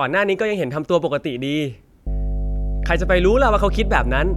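At 2.07 s a mains hum enters and runs to the end at 4.36 s. It is a steady 50 Hz tone with low harmonics, roughly as loud as the speech. The power line is leaking into the signal path, through a ground loop or nearby transformer.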